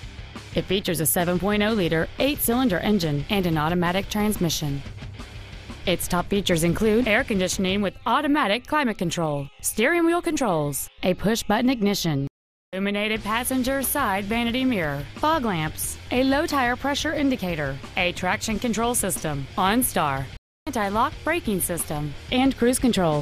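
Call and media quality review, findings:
Stream reconnect, twice: dropout 12.27–12.77 s, 0.45 s silent, picks up roughly half a second further on; again 20.37–20.69 s, 0.3 s gap, jumps ahead about 0.3 s. Connection dropped, player rejoined a live stream with a fresh decoder, so the missed audio is simply gone.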